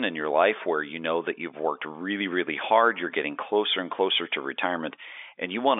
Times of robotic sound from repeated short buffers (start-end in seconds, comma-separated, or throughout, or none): none